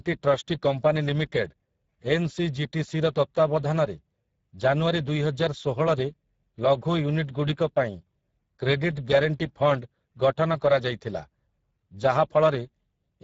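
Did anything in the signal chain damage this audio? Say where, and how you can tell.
Yes, at the codec stage: Speex coding runs through the whole speech clip. The speech sounds hoarse and noisy, with a sharp cut-off at 7.7 kHz. Starved CELP excitation explains the roughness, and the coarseness fits a low Speex setting near 10 kbps.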